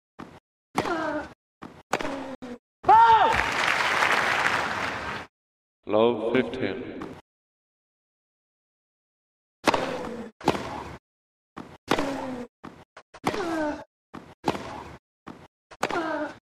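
At 2.35 s the sound drops to silence for about 72 ms, resuming at 2.43 s. This Bluetooth stall most likely came from interference delaying packets, so the headphones' buffer emptied and playback paused until resent packets arrived.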